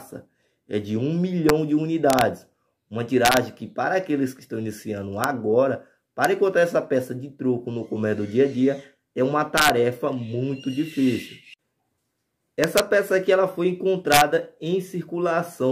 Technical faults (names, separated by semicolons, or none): integer overflow